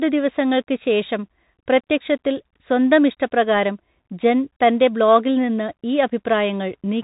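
Bluetooth CVSD headset codec damage runs through the whole speech clip: one-bit up/down delta coding leaves a granular hiss, scratchy s sounds, and no content above 3.8 kHz.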